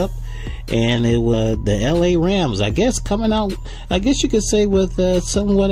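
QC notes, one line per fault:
throughout: hard clipping. The level is pushed about 2 dB past what the chain can pass, so a small share of samples, around a fifth of a percent, have their peaks sliced flat. This gives brief crackle on the loudest moments. On the waveform, those peaks show squared-off tops, and the spectrogram shows faint vertical smears of high harmonics at them.
1.33 s: skip ahead. Roughly 400 ms of audio is gone, and the material on either side is butted together with no silence in the 20 ms join. Playback jumps forward abruptly. On the waveform the envelope changes shape suddenly at the seam, and the spectrogram shows a hard vertical discontinuity where the harmonic patterns break.
1.92 to 5.42 s: jitter buffer speed-up. The receiver trims short pitch-period pieces again and again to shed backlog, about 200 ms in all, so the sound runs roughly 6% fast at unchanged pitch and feels slightly hurried. 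On the spectrogram, harmonics stay at the same heights while events arrive more closely spaced.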